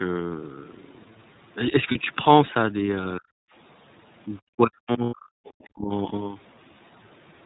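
The whole clip passes through the iLBC codec at 13.33 kbps with 30 ms frames. Nothing above 4 kHz survives, and the speech sounds rough and synthetic. At 1.91 s one lost iLBC frame leaves a 30 ms gap. The decoder repeats the last pitch cycle, and a brief buzzy hum fills it. From 3.19 to 3.34 s the speech drops by roughly 40 dB. The likely cause is speech suppressed in double talk, with the echo canceller muting the talker. From 4.39 to 5.38 s the same suppression returns for about a second. Within it, three lost iLBC frames cover 90 ms, from 5.04 to 5.13 s, and sound like a held, breathy vowel. From 5.45 to 5.67 s a faint second voice is heard, about 25 dB down. This is likely the other side's voice leaking through past the echo canceller. From 5.71 to 5.92 s the speech dips again by roughly 35 dB, once more from double-talk suppression.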